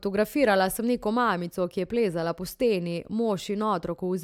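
No technical fault can be heard anywhere in the recording.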